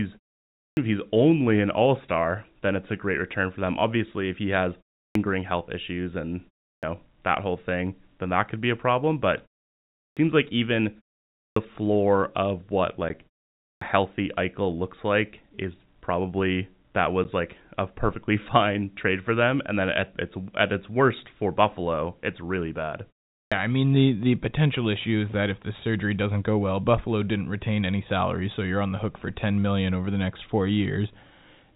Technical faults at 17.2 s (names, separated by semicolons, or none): packet loss filled with silence